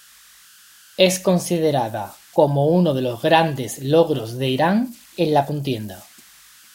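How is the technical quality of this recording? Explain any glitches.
The recording has one fault running through the whole clip: converter idle tones. An undithered delta-sigma converter locks into repeating bit patterns at low input, leaving a faint whistle around 1.5 kHz, about 30 dB below the speech.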